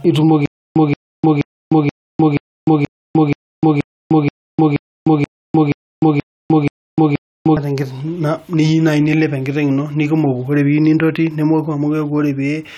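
From 0.46 to 7.57 s, a 176 ms burst repeats 15 times with 302 ms silent gaps: stutter with silent gaps, likely a stalled stream replaying its last fragment.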